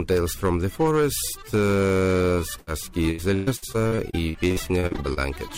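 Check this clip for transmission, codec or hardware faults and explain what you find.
Three faults are present: clipping on peaks throughout, one short dropout, and a longer choppy stretch of repeated loss.

Hard clipping runs through the whole clip. Peaks drive about 6 dB past the ceiling, so a small share of samples are flattened, adding crackle on loud moments.

A burst of packet loss occurs from 2.59 to 2.69 s. About 75 ms is concealed by extending and fading the last sound, and roughly 80 ms of audio goes missing.

Repeated packet loss (robotic sound) spans 3.11 to 5.19 s. Frequent gaps, the longest 122 ms, are patched in turn, covering about 28% of the stretch and giving choppy sound with pieces missing.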